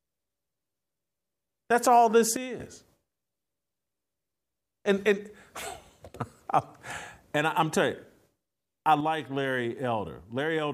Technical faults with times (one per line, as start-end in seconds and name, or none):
2.36-2.60 sudden gain jump
9.00-10.73 sudden gain jump